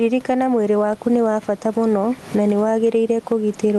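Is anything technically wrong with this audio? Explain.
Yes. Throughout the speech, gain pumping swings the level by around 15 dB, squashing loud and soft passages together. The likely cause is microphone gain set far too high, with a fast limiter or compressor clamping it down on every peak. The room's own background noise sits about 30 dB below the speech, and the call codec's bandwidth, which tops out near 12 kHz, is consistent with Opus at about 32 kbps.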